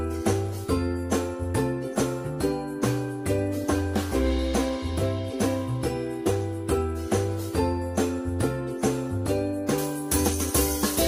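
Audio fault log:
9.78–11.08 s, pre-emphasis left on: the FM 75 µs treble boost stays in place without its matching de-emphasis, so the top end sits about 13 dB higher at 10 kHz than at 1 kHz, making the sound thin, bright and sibilant.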